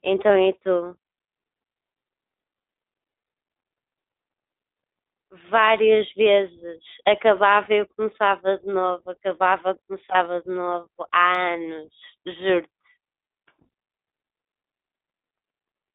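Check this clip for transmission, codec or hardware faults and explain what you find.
Two faults are present: narrowband iLBC coding throughout the clip, and a brief dropout from a lost iLBC frame.

The speech sounds thin, boxed-in and somewhat rough for its whole length, with a faintly synthetic edge that is plainly audible. The band runs only from about 300 Hz to 3.7 kHz, so sibilants lose their crispness and the voice lacks body. This is the iLBC codec, a narrowband VoIP coder that models each frame's excitation on its own rather than building on the previous frame. The character fits its 15.2 kbps mode with 20 ms frames.

From 7.64 to 7.68 s the speech briefly turns into a held, slightly buzzy vowel-like sound before normal speech returns almost immediately. This is lost iLBC frames. A packet went missing, and the decoder filled the gap by repeating the last pitch cycle blended with noise. 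Because each iLBC frame is decoded independently, the next good frame restores the voice straight away. The length of the gap fits a single lost 20 ms frame.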